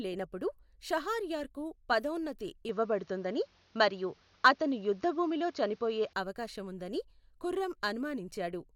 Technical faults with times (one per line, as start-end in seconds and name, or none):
2.69-6.13 input switched to a poorer device